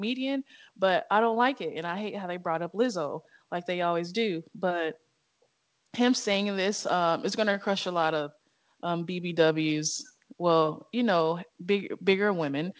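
Nothing in this speech recording points to a technical fault. It has passed through a WebRTC call path, and the sound suggests a G.722 call codec, with its usual coding noise and no content above 8 kHz.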